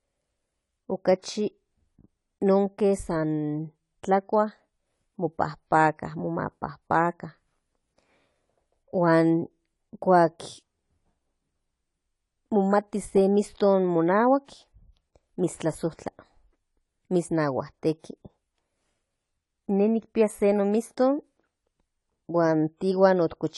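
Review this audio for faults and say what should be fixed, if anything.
Throughout the speech there is plainly audible AAC compression damage: dull, smeared sound with a fizzy, warbling edge on sibilants, most likely from AAC-LC at a low bitrate around 32 kbps. A spectrogram would show a lowered high-frequency cut-off and patchy holes between bands. Encode at a higher bitrate, or keep a lossless master and compress only once for delivery.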